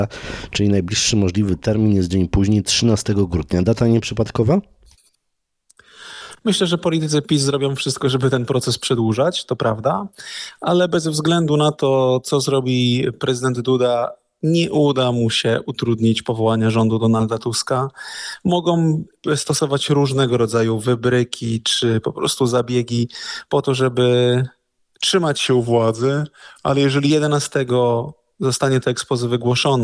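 From 25.47 to 27.10 s the sound drops and drags: everything runs at about 0.92 times normal speed and sits roughly 1.5 semitones lower, with pitch and tempo sliding together. That coupling marks a wrong sample rate fault. The samples are being clocked out more slowly than they were captured, with no resampling in between, and the ratio fits audio recorded at 24 kHz but played back at 22 kHz.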